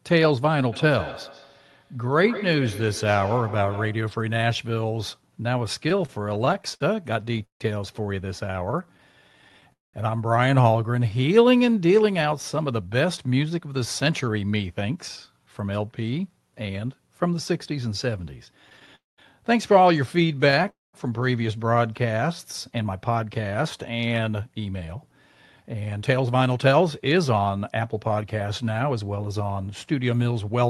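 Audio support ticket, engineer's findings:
Feedback echo between two devices, 0.72–4.18 s: speech comes back every 150 ms or so, thinner and ringing, peaking about 15 dB below the talker. A second device in the room replays the far side into an open mic that its echo canceller doesn't cover.

Repeated stalls (stutter), 5.89–9.69 s: speech drags and hiccups through 28 stretched moments, longest 153 ms, about 13% of the span. Packets arriving late kept draining the jitter buffer. The receiver extended the last sound each time, and nothing was dropped.

Call audio freeze, 9.73–9.95 s, 18.95–19.20 s, 20.70–20.95 s: sound hangs as a fading buzz, then roughly 180–190 ms of silence before resuming where it stopped. Each pause runs 209, 224 and 238 ms. The likely cause is packets held up in transit, which emptied the jitter buffer and added a gap to playback.

Jitter buffer speed-up, 12.17–16.33 s and 22.71–30.13 s: speech sounds hurried, 110% then 107% speed, with pitch unchanged. 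About 400 ms and 500 ms were trimmed in pitch-period slices to shed the excess buffered delay.

Scattered short gaps, 18.70–20.66 s: about seven brief ticks and smears, each 15 ms or less. These are isolated late packets patched by continuing the last sound. They overlap the freeze at 18.95 s, and the Opus path at 32 kbps, 12 kHz bandwidth, carries its usual coding noise.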